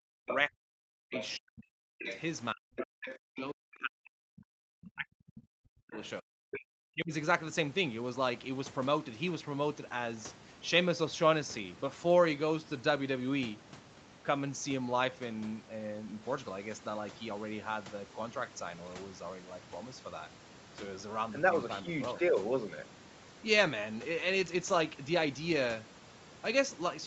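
From 0 to 2.05 s, and again from 2.53 to 7.13 s, the speech dips and breaks into pieces, falling by about 40 dB at its deepest, with most of each stretch affected. This is speech suppressed in double talk. The likely cause is an echo canceller that could not tell the local talker from loudspeaker echo while both sides spoke, so it turned both down. During and around those stretches, at 0.28 to 0.36 s, 1.13 to 1.29 s, 2.0 to 2.2 s, 2.76 to 3.17 s, 5.99 to 6.07 s and 6.53 to 6.6 s, short scraps of the other side's voice leak through. They sit about 5 to 25 dB below the speech and are likely residual echo from the loudspeaker that the canceller did not remove.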